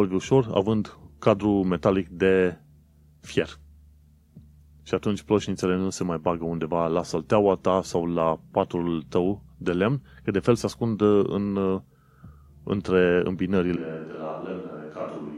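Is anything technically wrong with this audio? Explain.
Yes. From 13.76 s to the end, the speech suddenly turns roomy and hollow, loses its bass, and drops in level by about 10 dB, with the background noise of the room more noticeable underneath it. This is a switch to a distant microphone: the close microphone's signal was likely lost or left out at that point, so the recording falls back to a pickup farther away that hears more of the room and less of the voice. The speech never returns to the close sound.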